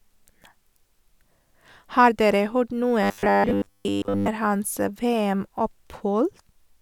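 A speech recording, with robotic sound from repeated short buffers between 3.03 and 4.28 s: the voice collapses into a rigid, metallic buzz at 100 Hz that only loosely tracks the words. The likely cause is audio arriving too seldom, so the playback repeats roughly a 10 ms block, filling most of that stretch while the real audio is skipped.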